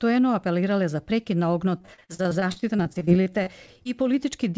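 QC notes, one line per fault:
1.78–3.87 s, repeated packet loss (robotic sound): the audio turns choppy, with around twenty short holes, the longest about 42 ms, adding up to nearly half a second of missing material. Each gap was patched by stretching the preceding sound forward, so roughly a quarter of this stretch is synthetic continuation rather than real signal. The quick succession of patches gives the buzzy, robotic texture.
2.21–4.20 s, jitter buffer slow-down: over this span the audio drags, running at about 93% of normal speed while keeping its original pitch, so sounds feel drawn out. The receiver was rebuilding its reserve by repeating single pitch periods and bits of pauses many times over, adding about 154 ms in total. Because this overlaps the loss stretch, the choppiness and the sluggish pacing are heard together.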